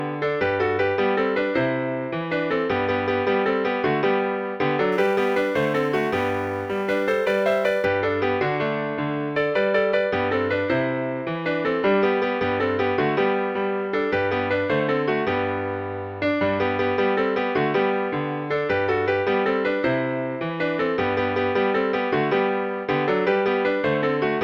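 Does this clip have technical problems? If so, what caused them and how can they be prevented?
Yes. From 4.92 to 7.85 s there is crude rate conversion: a gritty, inharmonic fizz that tracks the louder and brighter parts of the sound. The pattern fits a 48 kHz to 44.1 kHz change made by keeping the nearest existing sample instead of filtering, so the timing error repeats and creates spurious tones roughly 30 dB down. On a spectrogram, faint unrelated partials and aliased streaks would spread across the upper band. To prevent it, use a proper band-limited resampler.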